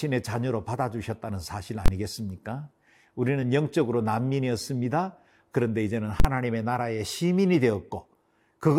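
At 1.86 s the speech is replaced by invalid numbers at full scale for about 23 ms, which fits a 1024-sample block. A calculation produced infinite or invalid values that were pinned to the maximum sample value, and the block this short is heard as a single loud bang.

At 3.42 s compressed frames are skipped: roughly 20 ms of audio is never played, so the speech jumps forward.

The same full-scale fault returns from 6.20 to 6.25 s, lasting about 46 ms, which fits a 2048-sample block. Here the longer block gives a hard pop at each edge with no sound between them.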